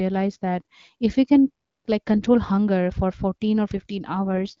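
It's a speech clip coming through an AMR wideband (HD Voice) call path, which sounds clean apart from light codec texture, until an AMR rate drop at 4.25 s that lasts to the end. The bandwidth holds and nothing cuts out, but the voice suddenly goes rough and raspy. That fits the network pushing AMR-WB down from 12.65 to 6.6 kbit/s, trading speech bits for error protection on a weak radio link.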